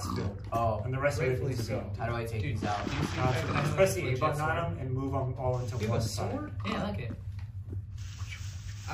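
No technical faults can be heard anywhere in the clip. Nothing in the audio stands out as a fault that needs describing.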